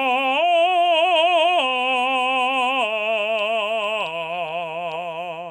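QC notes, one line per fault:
No faults heard anywhere in this music clip.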